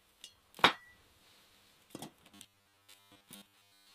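From 2.31 s to the end, a rigid, metallic 100 Hz buzz sets in, likely robotic sound from repeated short buffers of 10 ms, showing as spaced spectrogram stripes.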